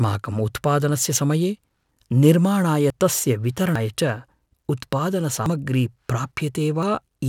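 Sudden jumps in the speech at 2.90, 3.76, 5.46 and 6.83 s, the 3.76 s skip longest, likely a dropped buffer (overrun) discarding audio.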